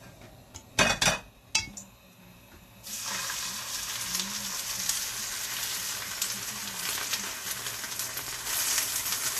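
Throughout, sound stops at 14.2 kHz and the treble beneath turns hissy and grainy, likely Vorbis compression; a plain low-pass filter would leave that treble clean.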